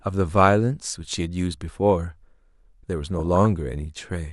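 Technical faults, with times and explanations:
3.14–3.46 s DAB burbling: bit errors slip through error correction, so single sub-bands jump level frame by frame, short blips of noise, unlike steady low-bitrate swirl.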